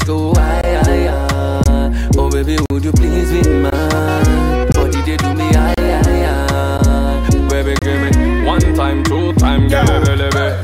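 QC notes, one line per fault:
0.61, 1.64, 2.66, 3.70, 4.72, 5.74, 6.78 and 7.79 s: gap between stream segments. Timestamps of consecutive 1-second segments leave small holes that the player fills with silence, so the sound cuts out abruptly for 13 to 44 ms roughly once per second, with hard edges. No audio is lost; it is just pushed later.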